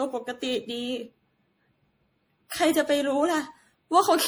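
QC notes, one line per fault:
Throughout, generation loss: the speech is swirly, smeared and hollow beyond what one low-bitrate encode would cause, and attacks are blurred. Likely cause is about five successive MP3 encodes near 64 kbit/s, each requantising on a shifted frame grid, so noise and spectral holes accumulate.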